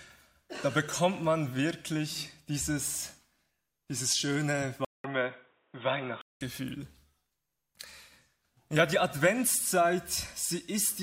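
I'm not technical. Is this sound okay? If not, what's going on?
No. From 4.85 to 6.41 s, after a short gap of about 0.2 s, the sound turns dull and boxy, with nothing above 3.8 kHz and a faint new hiss at much the same loudness. This is likely an input switched to a poorer device.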